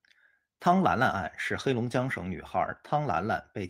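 No technical faults can be heard anywhere in the recording, and the signal holds steady throughout.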